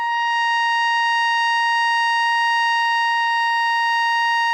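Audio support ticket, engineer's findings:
Listened through the music clip and nothing stood out; no findings to log.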